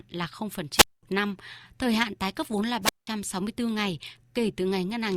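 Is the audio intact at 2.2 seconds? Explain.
Yes, at 2.2 seconds the speech plays through intact, with no audible dropout, click, distortion or other fault at that point.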